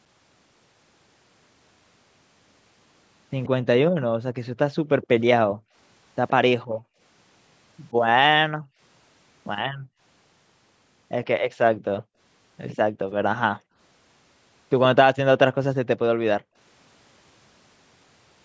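A far-end echo canceller likely let loudspeaker pickup through, producing an echo leak: at 3.43 to 3.48 s, 5.02 to 6.3 s and 11.25 to 12.03 s a faint copy of the speech trails it by about 121 ms, roughly 20 dB down (nearer 25 dB in the middle stretch).

The canceller also clamped the microphone while playback was active, so the background is gated by the echo canceller. Between 3.91 and 10.0 s the room sound drops out by up to about 40 dB, for around one and a half seconds in total. Between 12.03 and 13.77 s it falls away for about half a second, and again briefly from 16.38 to 16.56 s.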